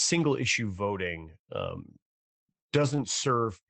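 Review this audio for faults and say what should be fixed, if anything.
Lost packet rebuilt from error correction, 1.69 to 1.71 s, just after "issue voting": one 20 ms packet was dropped, and the next packet's low-bitrate backup copy was decoded in its place. There is no gap, but that instant sounds briefly rougher and noisier. Keeping Opus in-band FEC enabled with enough redundancy, and reducing loss on the network path, keeps these rebuilds rare.

Repeated packet loss (robotic sound), 2.25 to 3.30 s: seven separate gaps, the longest 24 ms, leave about 140 ms missing. About 109 ms of that is filled by stretching the preceding sound, which makes the passage choppy, with pieces missing. Fixing the unstable network link, or using a larger adaptive jitter buffer, would prevent this run of concealments.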